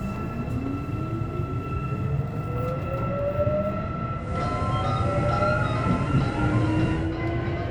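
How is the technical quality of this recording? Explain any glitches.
There is one glitch, a digital radio blend to analogue, from 4.13 to 7.18 s. The receiver lost digital and cross-faded over 268 ms to FM. Hiss appears around 30 dB down, and level shifts about 3 dB.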